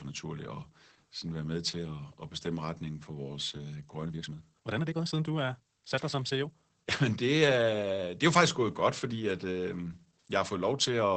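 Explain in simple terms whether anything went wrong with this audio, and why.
The whole clip has Opus voice compression, squeezed hard to save data. Nothing above about 8 kHz survives, so the speech sounds muffled, and it also comes out hoarse and slightly robotic. That rough, synthetic texture is what sets it apart from a plain dull recording.

From 4.03 to 6.99 s there's a time-stretched section: the speech suddenly runs about 1.58 times faster but stays at the same pitch, sounding rushed. Editing software likely dropped short slices to fit a length. A fast talker would speed up smoothly rather than jump in pace.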